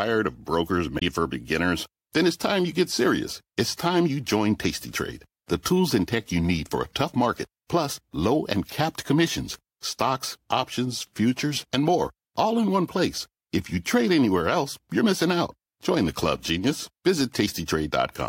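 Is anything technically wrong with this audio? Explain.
Yes. Between 0.96 and 1.02 s in this speech, just after "of brokers" and before "for beginners", there is damaged data in the compressed stream. Some of the encoded bytes there are corrupt, so the decoder misreads those frames, loses sync and scans ahead for a valid frame header. The result is a brief chirp or blip of about 66 ms. On a spectrogram it appears as a short smear of broadband or tonal energy unrelated to the surrounding speech, and in the waveform as an abrupt, irregular burst.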